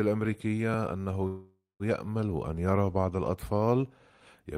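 From 1.27 to 1.83 s there is a call audio freeze. The sound stretches into a fading buzz, then about 190 ms of silence, and resumes intact. Delayed packets likely emptied the jitter buffer.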